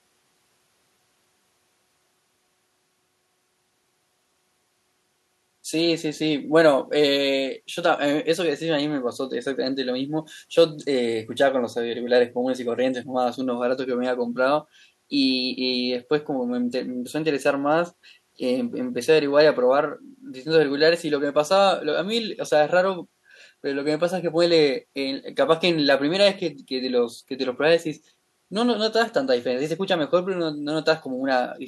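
No faults to report: the speech signal runs its full duration without any audible defect.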